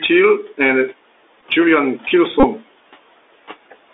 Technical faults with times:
0.00-3.94 Bluetooth CVSD headset codec
1.41 Bluetooth headset packet repeated
2.40-2.45 Bluetooth headset packet repeated

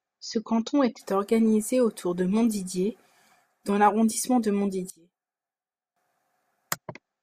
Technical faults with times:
4.90-5.96 one channel inverted

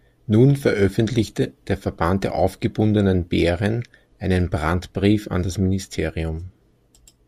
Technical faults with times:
none

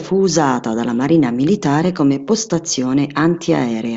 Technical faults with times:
none

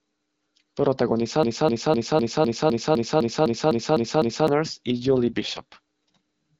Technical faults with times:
1.43-4.48 broken-record loop
4.87-6.16 AMR rate drop

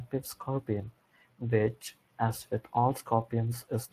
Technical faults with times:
0.00-3.92 Speex codec

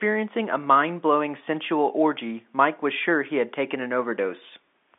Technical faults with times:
none

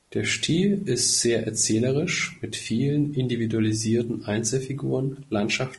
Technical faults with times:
0.00-5.78 low-delay AAC compression

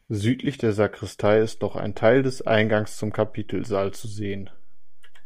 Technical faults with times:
1.26-5.25 DC step

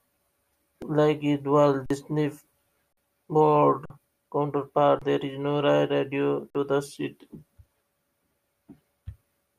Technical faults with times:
0.82 repeated buffer
1.86-1.90 underrun with held sample
2.93-2.97 underrun with held sample
3.85-3.90 underrun with held sample
4.99-5.02 underrun with held sample
6.50-6.55 underrun with held sample

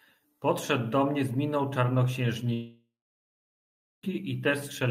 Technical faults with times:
2.53-4.05 long network dropout

